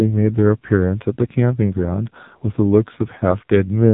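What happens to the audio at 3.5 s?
At 3.5 s the speech carries AMR narrowband mobile codec damage, which runs through the whole clip rather than starting there. Everything above 3.8 kHz is gone, so sibilants and consonant edges sound dull and boxy. The codec rebuilds the voice from a vocal-tract filter excited by a few pulses per subframe, and the heavy buzzy, synthetic coloration points to one of its low-rate modes, around 5.9 kbps.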